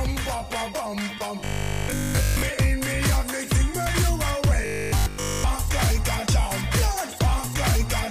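A likely buffer underrun makes the playback repeat one 20 ms chunk at a time instead of fresh audio, giving robotic sound from repeated short buffers from 1.40 to 2.42 s and again from 4.62 to 5.44 s. The looping stamps a rigid 50 Hz buzz onto the sound. In the first stretch nearly everything is repeated, so the real audio is almost entirely lost. In the second, most of it is, leaving a metallic drone that only loosely tracks the original.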